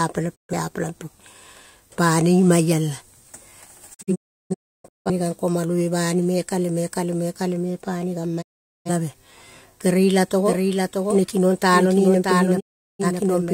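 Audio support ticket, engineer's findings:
Digital broadcast dropout, four events. Speech mutes with a short fade of about 20 ms at 0.34–0.54 s, 8.41–8.90 s and 12.59–13.05 s. At 3.93–5.11 s it breaks into several short holes, the longest 341 ms. Hole sizes fit whole decoder frames of roughly 43 ms. Component is the receiver/decoder: frames failed checksum or signal was lost, output muted until valid frames resumed. Lost audio is not recoverable.

Doubled audio track, 10.45 s to end of clip. A second full-band copy of the speech runs roughly 0.7 s behind the original, about 5 dB quieter. It has no reverb tail or room colouring and starts abruptly. Likely cause is a second capture through a slower path, or an edit holding two out-of-step copies. The dropout at 12.59–13.05 s falls inside this section.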